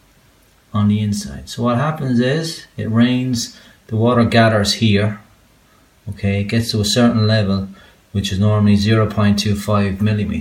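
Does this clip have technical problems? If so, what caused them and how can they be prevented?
No, there are no technical faults to trace or prevent in this recording.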